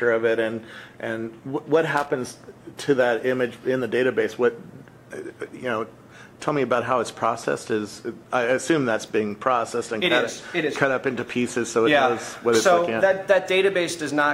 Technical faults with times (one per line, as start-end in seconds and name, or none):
1.97-2.08 loose connector crackle